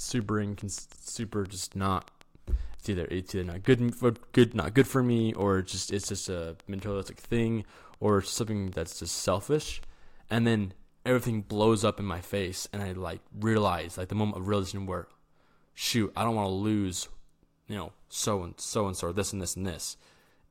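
Something in the chain, likely electrical interference from nearby equipment or a faulty connection or power supply, was injecting short pulses into the signal from 0.09 s to 9.84 s. The result is a train of clicks over the speech: some fifty near-identical ticks at an uneven pace averaging about 4.8 per second, peaking about 5 dB above the speech and audible in the pauses as well. They stop just before "and then everything blows".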